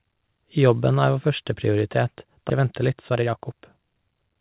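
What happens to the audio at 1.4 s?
Nothing goes wrong at 1.4 s: the speech there comes through intact, carried by a call path whose G.711 coding leaves it band-limited to below 4 kHz.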